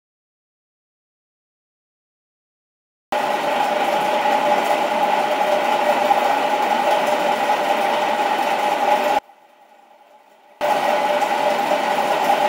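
The clip opens in silence, with no room tone, until 3.12 s: an audio dropout to silence, likely a lost input while recording continued. From 9.19 s to 10.61 s the sound falls by about 31 dB to a faint residue, likely one channel inverted, cancelling shared content when summed to mono.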